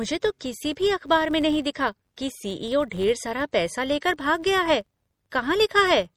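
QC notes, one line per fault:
throughout, MP3 compression: the speech has a watery, swirling quality, with metallic chirps on s sounds and softened consonant attacks. This is plainly audible and likely comes from low-bitrate MP3 encoding, around 48 kbps, dropping weak frequency lines frame by frame.
throughout, filter restarted on every block: a steady buzz at 93.8 Hz sits under the speech and rises and falls with its level. It fits a filter processing 512-sample blocks and resetting its state each time, so every block starts with a small transient.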